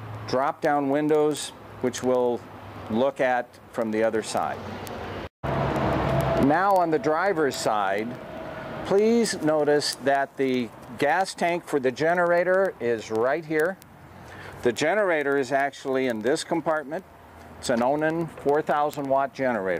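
Word clock ticks run from 0.15 to 19.77 s: a steady rattle at roughly 20 per second, as an unlocked receiver's clock, off by a few hundred ppm, repeatedly drops or repeats one sample.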